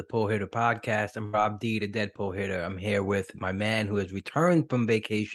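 A speech recording with one glitch: a burst of packet loss from about 1.25 to 1.35 s. A short run of packets never made it in time, so the receiver papered over the hole by stretching out the last bit of sound it had, fading it down over roughly 77 ms. When the audio picks back up, about 80 ms of the original is simply gone, so the speech jumps ahead slightly.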